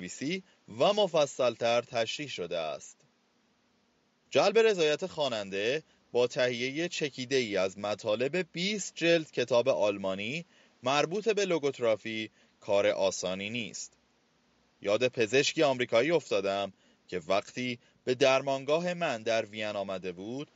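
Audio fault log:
The speech signal holds steady and continuous throughout, with only the room's own background noise sitting about 41 dB beneath it.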